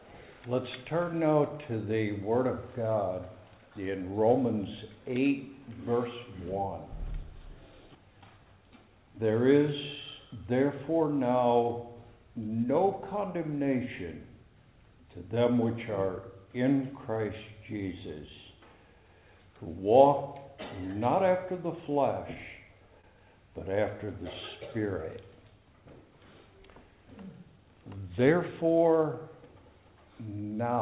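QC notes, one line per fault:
23.01–23.07 s and 24.06–24.10 s, short stall from a late packet: sound briefly held about 20 ms, then resumes where it paused, with nothing skipped, unlike loss concealment.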